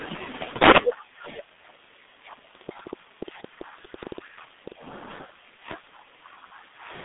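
Throughout, heavy G.723.1 codec damage at a rate fitting 6.3 kbit/s leaves the speech muffled and hoarse, band-limited to 150 Hz–3.6 kHz, with blurred consonants and nothing above 3.8 kHz.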